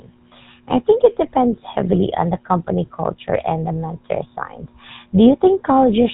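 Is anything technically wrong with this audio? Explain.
Yes. GSM full-rate codec damage runs throughout the speech, consistent with a 13 kbps GSM full-rate stream. The codec models the vocal tract and excites it with sparse, regularly spaced pulses, so the speech sounds plainly buzzy and gravelly, with nothing above 4 kHz.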